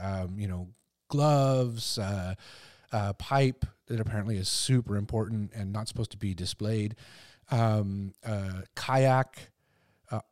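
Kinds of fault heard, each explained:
No technical faults can be heard in this speech recording. There is nothing to list for any kind of fault.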